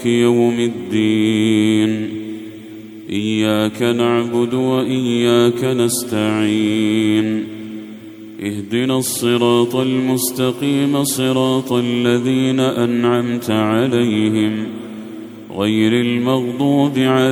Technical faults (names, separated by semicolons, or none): none